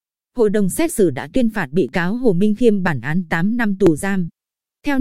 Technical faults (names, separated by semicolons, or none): periodic USB or driver dropouts